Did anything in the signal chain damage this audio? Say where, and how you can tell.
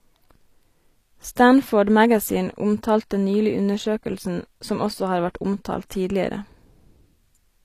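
Yes. Throughout, the s sounds are gritty and metallic, with nothing above 15 kHz, which points to likely HE-AAC compression at the codec stage, near 24 kbps, where replicated treble misaligns with the true harmonics.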